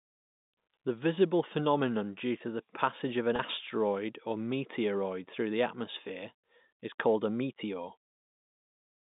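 At 3.36 s, right after "the passage of an", the speech briefly holds and turns faintly buzzy until 3.39 s before carrying on. This is packet loss with pitch repetition: about 30 ms of audio went missing, which fits a single lost packet, and the receiver filled the hole by repeating the last pitch period rather than leaving silence. The gap is short enough that the repeat never fades out. It sits within narrowband telephone audio running from 150 Hz to 3.7 kHz.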